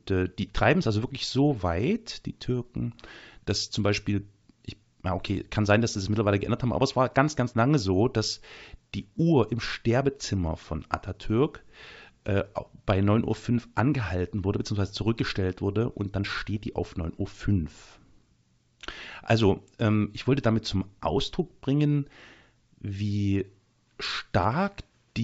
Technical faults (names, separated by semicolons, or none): none